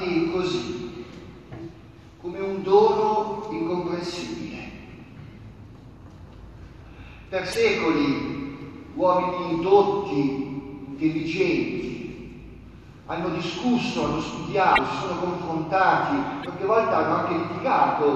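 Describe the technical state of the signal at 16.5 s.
A broken MP3 bit reservoir disrupts the audio just before that point, from 16.42 to 16.46 s. The sound skips ahead with a brief glitch. Frames were likely lost, so the next frame read borrowed data from the wrong bytes.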